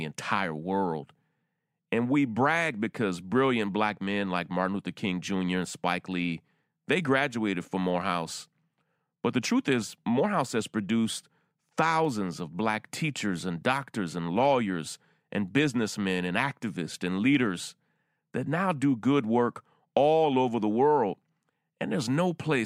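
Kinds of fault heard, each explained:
Dropped samples: there's a single sharp click at about 12.05 s, right before "of black teachers and", showing up as a thin vertical line across the whole spectrum. The likely cause is a handful of samples going missing, only a small fraction of a millisecond's worth, so the waveform jumps straight from one value to a later one. Nothing audible is actually removed; the abrupt step is what you hear as the tick.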